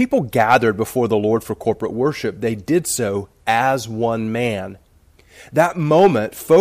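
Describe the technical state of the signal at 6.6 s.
At 6.6 s the speech is hard clipped, from 6.52 s to the end of the clip at 6.60 s. The signal drives about 3 dB past what one stage can pass, so its peaks are sheared flat, adding high harmonics that sound as crackle on the loudest moments.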